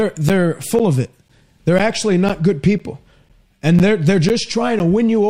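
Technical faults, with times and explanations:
0.29 to 4.8 s, periodic USB or driver dropouts: about ten brief gaps in the speech, one every 0.5 s, each of around 10 ms, where the audio is replaced by silence. A background task holding up the USB bus or audio driver at a fixed interval lets the stream run dry, and each sudden cut gives a regular tick. On the waveform these are short flat gaps at even spacing. On the spectrogram they are thin vertical bars, blank at the gap and bordered by broadband clicks.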